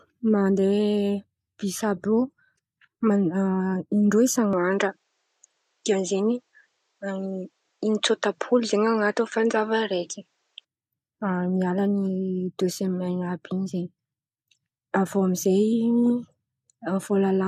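At 4.53 s the recording likely switched its input to a poorer device, one passing nothing above 8.5 kHz. The speech turns duller at once, with no gap and no level jump, over a faint new noise floor, then clears again at 10.65 s.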